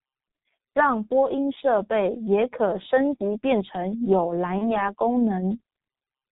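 From start to end the speech runs through a heavily degraded G.723.1 codec. The band stops at 4 kHz, and the coarse, slowly updated vocal model leaves the voice muffled and hoarse, with smeared consonants. The sound fits a G.723.1 stream at roughly 6 kbit/s, where 30 ms frames give the encoder little to work with, so the damage is heavy throughout.

Between about 4.59 and 4.90 s there is VoIP packet loss concealed by the speech codec. The missing audio points to a single 30 ms frame. The decoder filled it by repeating its last pitch and filter settings at falling gain, which gives a short, fading stretch. Because each frame depends on the previous one, the voice stays weak or distorted for tens of milliseconds or more before it recovers.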